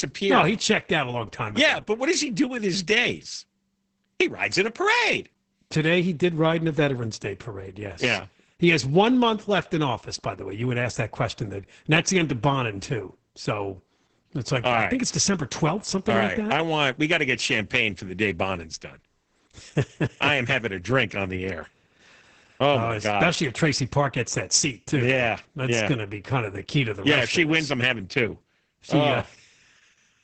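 Throughout, the speech sounds muffled, hoarse and slightly robotic, with nothing above 8.9 kHz: heavy Opus voice compression, its SILK coder starved at what sounds like about 10 kbps.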